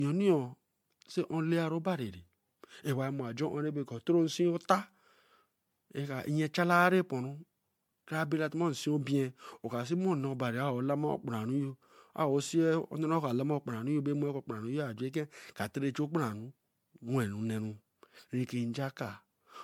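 Generation loss runs throughout the speech, from start to end. The sound is swirly, smeared and hollow, with soft attacks and nothing above 19.9 kHz. The likely cause is MP3 re-encoding around seven times, consistent with 96 kbit/s, each pass quantising on a shifted frame grid.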